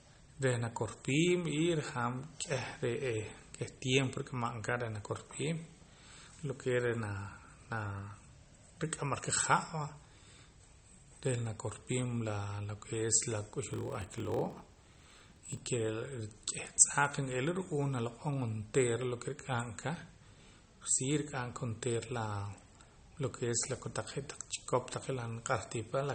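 Throughout, speech sounds watery and swirly, likely MP3 compression at a low bitrate, around 32 kbps. From 13.69 to 15.60 s, a block size mismatch (padded) inserts zero-filled gaps, producing a 43.1 Hz buzz. This fits 1024-sample reads, and speech slows to 0.938 times normal speed at unchanged timbre.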